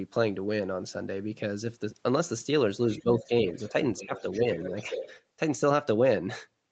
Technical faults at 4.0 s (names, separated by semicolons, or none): other side's voice leaking through; speech suppressed in double talk